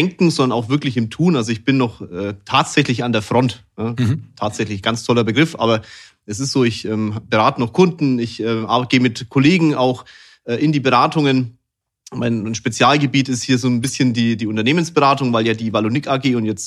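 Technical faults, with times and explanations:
13.83–13.90 s, corrupt frame decoded: A short, sudden artefact cuts into the speech for about 70 ms. It has no relation to the surrounding sound. Its peak is loud, near -10 dBFS. The length fits roughly three damaged compressed frames. Bits in those frames were flipped, yet the decoder played them anyway. Misread gains and codes put energy at the wrong frequencies, so the burst sounds like a sudden artefact.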